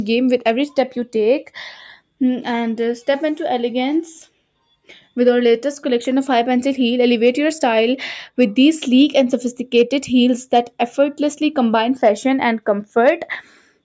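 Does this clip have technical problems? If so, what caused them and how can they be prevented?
Yes. From 13.43 to 13.78 s, near the end, the sound sinks by about 12 dB for roughly a third of a second. The noise suppressor mistook it for noise and turned it down. The call microphone processing, which leaves nothing above 8 kHz, is working normally. To prevent this, lower the suppressor's strength or use a gentler mode so that steady or fading sounds are not treated as noise.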